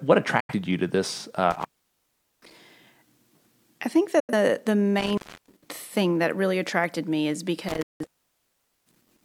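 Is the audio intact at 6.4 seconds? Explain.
Yes, the speech at 6.4 seconds plays through intact, with no dropout, click, distortion or other fault at that moment.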